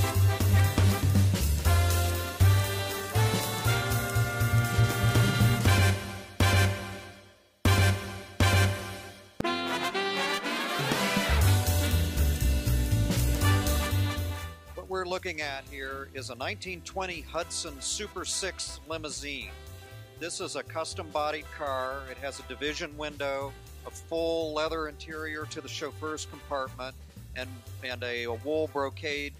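No technical faults can be heard anywhere in the recording; the signal stays steady and intact throughout.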